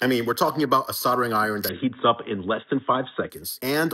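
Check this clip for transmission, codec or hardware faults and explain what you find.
One fault stands out. From 1.69 to 3.30 s the sound turns dull and boxy, with nothing above 3.8 kHz, a level shift of about 5 dB and a faint new noise floor. There is no gap at the change. The likely cause is the input switching to a poorer device, whose narrower band and different gain take over until the original path returns.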